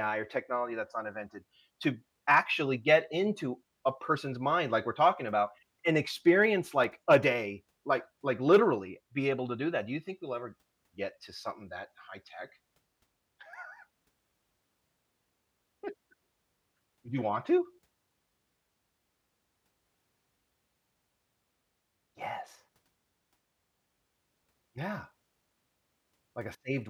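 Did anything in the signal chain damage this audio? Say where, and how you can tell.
Yes, CD scratch ticks at playback. Eight short ticks, the longest lasting about 2 ms, repeat between 6.44 and 7.83 s, about six a second. Each disc revolution hits unrecoverable damage.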